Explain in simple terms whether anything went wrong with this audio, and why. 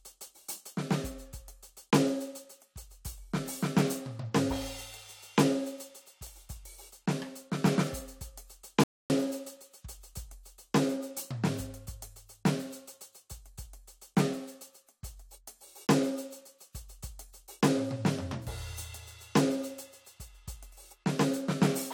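One thing went wrong: a rebuffering stall in the music at 8.84 s. The playback stops dead and stays silent until 9.10 s, then picks up exactly where it left off. That happens when the player uses up the audio it has already downloaded and has to wait for more to arrive. No part of the music is skipped; the pause simply adds about a quarter of a second to the total running time.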